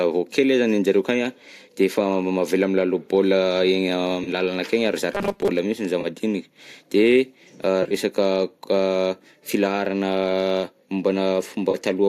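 Brief smeared, phasey patches break the speech at 4.24 to 4.29 s, 6.01 to 6.06 s and 11.71 to 11.76 s. This is AAC frame loss with concealment: about 30 ms of audio went missing each time, which fits three lost frames, and the decoder filled each gap from the last good spectrum. At 7.83 to 7.94 s a similar roughness recurs in bursts, with about 60 ms lost across roughly 80 ms and the longest gap around 20 ms.

From 5.13 to 5.50 s the speech turns into a rigid, metallic buzz at 200 Hz that only loosely tracks the voice. This robotic sound most likely comes from repeated short buffers. Audio arrived too seldom, so the software looped what it last had, in pieces that fit a 5 ms buffer, and that repetition replaced most of the real sound in this stretch. Throughout, the low-delay AAC compression (likely AAC-ELD at 64 kbps) leaves only light coding roughness.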